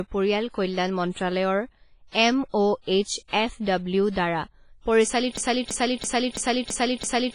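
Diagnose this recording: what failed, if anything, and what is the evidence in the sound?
The codec stage has failed audibly across the whole recording. The speech has a ringing, washy quality with a hiss that rises and falls with the level, and nothing is present above 10.4 kHz. This points to heavy WMA compression, likely at a low bitrate in the region of 24 kbps. The transform coder has zeroed the weaker spectral lines and spread quantisation noise across each long block.

Pre-echo from the same codec is audible before three sharp onsets: 1.11 to 1.16 s, 2.81 to 2.87 s, and 3.28 to 3.33 s. Each time a short hiss precedes the attack by about 56, 59 and 52 ms respectively, and the attack itself sounds softened. The loud onset fell late in a transform block, so noise sized for it also filled the quiet stretch ahead of it.

A broken-record loop begins at 5.37 s and runs to the end. A fragment of about 332 ms repeats exactly, back to back, six times. 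The fault likely sits in playback or streaming, where the player or stream stalled and kept resending the last buffered fragment. Whatever audio belonged to that final two seconds is lost and was never delivered to the output.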